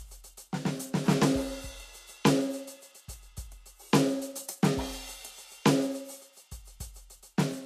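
From start to finish the music sounds dull and airless at the top, with nothing at all above about 14.1 kHz and the artefacts of an earlier encoding still present. The likely cause is low-bitrate audio saved at a high bitrate: those artefacts and the cut-off fit an earlier pass through a low-bitrate codec such as Vorbis at around 36 kbit/s, and re-encoding it as MP3 at a generous rate like 256 kbit/s cannot bring back what that first pass discarded.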